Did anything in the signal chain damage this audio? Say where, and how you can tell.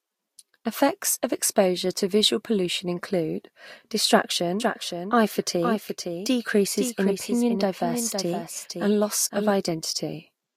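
Yes. From 4.60 to 9.50 s the speech is doubled by a copy about half a second late and somewhat quieter. This is a doubled audio track, likely a second, slower capture path.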